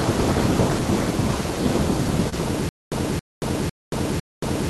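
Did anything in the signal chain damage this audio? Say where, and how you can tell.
Yes. Network stage: short concealed packet loss at 2.29–2.34 s, where a brief smear replaces about 20 ms of missing speech, bridged by decoder extrapolation.

Playback stage: from 2.69 s to the end, a 274 ms fragment repeats four times with 228 ms of digital silence between, likely a stalled stream causing stutter with silent gaps.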